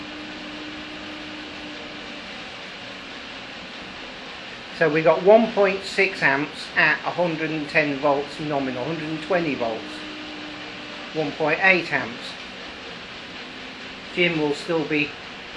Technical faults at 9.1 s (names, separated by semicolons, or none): none